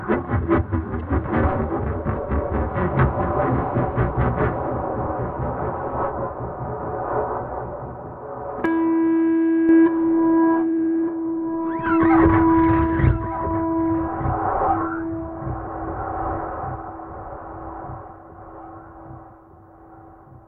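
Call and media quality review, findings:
Corrupt frame decoded, 0.99–1.01 s: short squeaky blip peaking around -20 dBFS, one damaged codec frame. Flipped bits sent energy to the wrong frequencies and the decoder played it anyway.

Sudden gain jump, 8.66–9.69 s: sound and background both drop about 6 dB in one step, then snap back. Likely a gain setting applied without a ramp.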